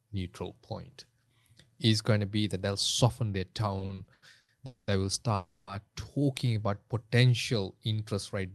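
From 3.79 to 4.51 s, packets kept arriving late, so the jitter buffer ran dry six times. This repeated stall (stutter) stretches the last sound across 270 ms of gaps, up to 90 ms each, making the audio drag and stutter.

At 4.66 to 4.90 s and 5.35 to 5.70 s, call audio freezes hold the last sound as a fading buzz or hiss for 210 ms and then 320 ms before the audio resumes unbroken, likely from packets delayed in transit.

From 6.47 to 6.75 s, a jitter buffer slow-down repeats single pitch periods to rebuild its reserve, adding 37 ms. The audio plays at 90% speed with the pitch unchanged, so sounds are slightly drawn out.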